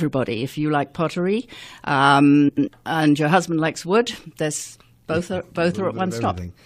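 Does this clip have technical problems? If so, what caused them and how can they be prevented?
Yes. From 2.48 to 2.68 s the speech breaks into a brief garbled flutter, caused by frames out of order. Two adjacent blocks of about 93 ms each, which fits runs of four frames, were swapped before decoding, so that stretch plays back-half first. Unlike a dropout or skip, nothing goes missing and the timing stays intact: all the sound is there, only rearranged. Prevent it with sequence-numbered packets and a jitter buffer that reorders frames before they reach the decoder.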